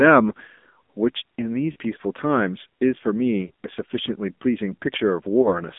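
From start to finish the speech carries the AMR narrowband mobile codec sound: band-limited to roughly 200 Hz to 3.6 kHz, with plainly audible buzzy, synthetic coloration from the pulse-driven vocal tract model. The low-bit-rate harshness fits the 7.4 kbps AMR-NB mode.

Lost AMR speech frames then appear at 1.72 to 1.76 s, 3.48 to 3.50 s and 5.42 to 5.49 s. Each time the decoder replays the previous pitch and filter settings at falling gain, producing a brief dip or warble. The first gap fits two missing 20 ms frames, the others one each.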